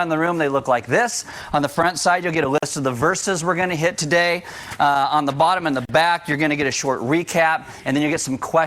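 The audio drops out twice, at 2.58 s for about 46 ms and at 5.85 s for about 40 ms, each a gap at a join of encoded pieces. Separately encoded chunks were butted together untrimmed, so encoder delay and end padding leave short, smeared silences before the sound picks up where it stopped.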